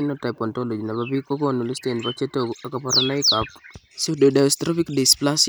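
No technical faults are audible anywhere in the speech recording.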